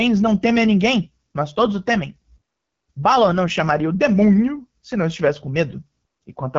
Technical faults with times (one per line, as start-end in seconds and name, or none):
0.00-6.58 AMR wideband (HD Voice) codec